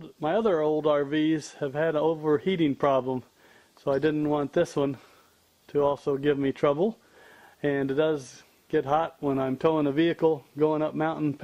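Faint clock slip clicks tick through the sound from 0.21 s to 11.40 s, around every fifth of a second, each a single dropped or doubled sample. That's likely two unsynced device clocks drifting apart by something like 100 ppm.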